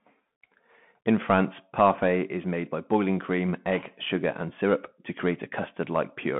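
Throughout, the speech carries Bluetooth CVSD headset codec damage. The band runs from 150 Hz to 3.4 kHz. Nothing sounds above 3.8 kHz. One-bit steps, which fit a 64 kbit/s stream, lag loud highs. These distort. S sounds turn scratchy. Granular hiss lies beneath.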